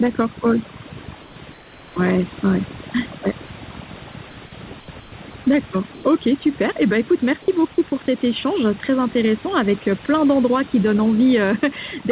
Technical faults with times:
0.00-12.12 overdone noise removal
0.00-12.12 gain pumping
1.22-1.96 comfort noise in place of the background
4.80-5.12 comfort noise in place of the background
5.94-6.04 comfort noise in place of the background
7.90-8.08 sound dropped by the voice detector

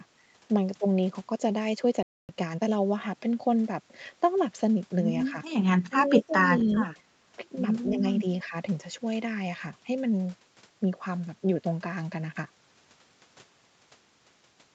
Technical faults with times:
2.03-2.29 playback stall
2.29-2.81 time-compressed catch-up
5.31-5.36 speech suppressed in double talk
5.89-6.34 speech suppressed in double talk
6.71-6.77 echo leak
7.91-8.03 speech suppressed in double talk
8.44-8.54 speech suppressed in double talk

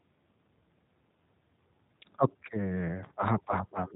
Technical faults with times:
0.00-3.96 G.729 codec

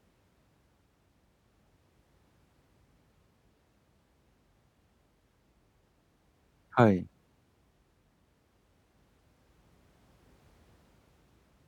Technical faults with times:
none

